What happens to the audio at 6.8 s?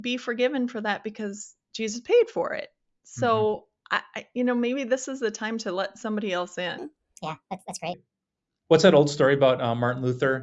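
From 6.78 to 7.94 s, a wrong sample rate, fitting 16 kHz audio played at 24 kHz, makes the speech 1.5 times faster and about seven semitones higher at once. Pitch shifting would leave the timing unchanged.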